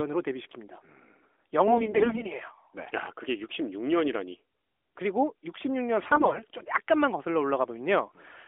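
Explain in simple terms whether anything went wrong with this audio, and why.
AMR bit errors make the speech turn hoarse and gargly from 1.66 to 2.28 s, and more mildly from 6.04 to 6.46 s. It keeps its pitch and loudness instead of dropping out.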